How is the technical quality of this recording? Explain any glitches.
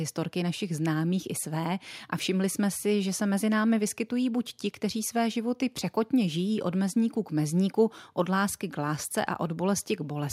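Nothing here needs explaining, since I can't pick out a single glitch anywhere in this speech recording.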